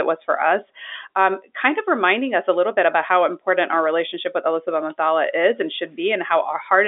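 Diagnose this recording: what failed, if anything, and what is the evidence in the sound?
Nothing has failed here; the speech just has the ordinary narrow-band character of G.711 telephone coding, running from 300 Hz up to 3.6 kHz with nothing above 3.7 kHz, which is exactly how a working phone line is meant to sound.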